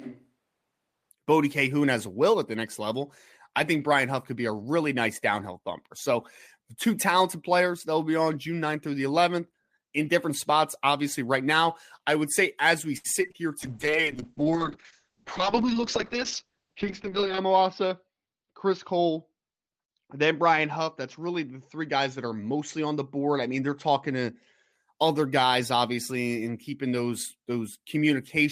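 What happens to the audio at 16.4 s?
Two faults overlap at 16.4 s. A call bitrate drop runs from 13.64 s to 24.78 s, ending just before "other guys obviously and". The falling bandwidth estimate pushed the encoder from 32 kbps down to 7 kbps, where it stayed for about 3.8 s. Audio bandwidth shrinks from 20 kHz to 8 kHz. The speech sounds muffled and coarse.

Inside that span, a jitter buffer speed-up runs from 15.41 s to 16.45 s. The buffer held too much audio, so the receiver trimmed short pitch-period pieces repeatedly, around 70 ms in total. Playback runs at 105% speed with unchanged pitch. The speech sounds slightly hurried.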